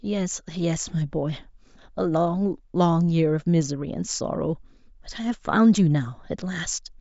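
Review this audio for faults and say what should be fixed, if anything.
Nothing to fix: no faults turned up anywhere in the speech.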